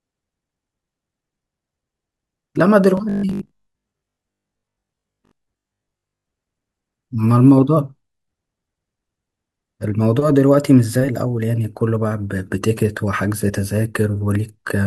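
From 2.97 to 6.29 s the speech becomes a rigid, metallic 50 Hz buzz. This is robotic sound from repeated short buffers, likely a 20 ms chunk replayed while roughly 70 percent of the real audio is skipped. Unlike stutter, the buzz stays at a fixed rate.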